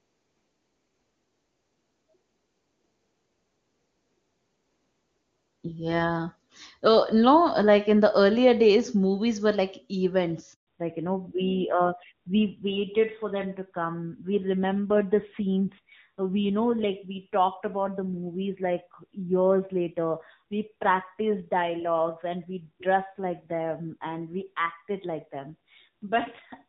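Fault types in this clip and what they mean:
handover gap: The call was passed between networks at about 10.53 s, and no speech frames reached the receiver while the link switched over. The speech cuts away abruptly and stays silent for 140 ms, until 10.67 s, when the new connection begins delivering audio. Whatever was spoken inside that window is gone rather than muffled.
fallback to narrowband: From 10.67 s to the end, the call no longer runs on HD Voice. The bandwidth narrows in a way that fits AMR-WB at around 23.85 kbit/s giving way to AMR-NB at around 7.4 kbit/s. Nothing above 4 kHz survives after the switch, so sibilants and consonant detail lose their edge, and the low-rate narrowband coding leaves the speech sounding duller and rougher than the clean wideband section before the gap.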